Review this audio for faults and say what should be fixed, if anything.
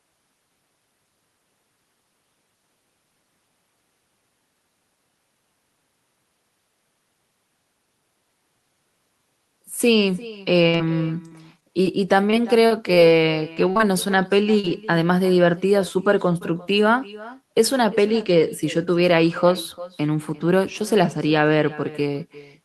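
Echo with no canceller runs the whole way through: the far end's loudspeaker feeds its mic, so every phrase returns roughly 0.4 s later, about 19 dB down and thin.

Repeated packet loss (robotic sound) hits from 10.63 to 13.81 s, with a dozen or so holes patched by stretching the last sound. The longest is 48 ms, and it comes out choppy.

Short concealed packet loss shows up at 14.59 to 14.65 s, where about 40 ms went missing and got filled in, leaving a quick smear.

To fix it, turn on acoustic echo cancellation at the far end and give the link a steadier network path with a bigger jitter buffer or FEC.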